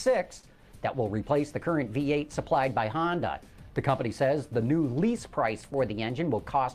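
Right near the start, from 0.39 to 0.45 s, there's a short stall from a late packet. The jitter buffer ran dry, so the receiver stretched the last bit of sound by 38 ms until the packet showed up, then carried on with nothing lost. You hear it as a brief held moment with a faint buzzy dip.

Then from 5.93 to 6.56 s there's a jitter buffer speed-up. The buffer had built up extra delay, so the receiver trimmed tiny pitch-period slices over and over, around 50 ms in total. The sound runs at about 106% speed with the pitch unchanged, so that stretch feels slightly rushed.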